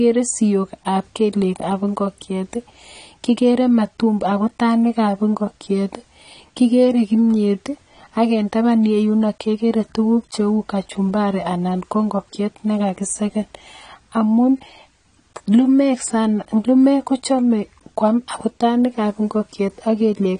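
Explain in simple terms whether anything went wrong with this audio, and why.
Yes. Throughout the clip, the speech sounds dull and smeared, with a fizzy, watery edge on hissy sounds like s and sh, and nothing at all above about 10 kHz. This is most likely AAC compression. To keep the file small, the encoder discarded the finest detail it judged least noticeable and cut off the top of the sound. Those shortcuts are clearly audible here.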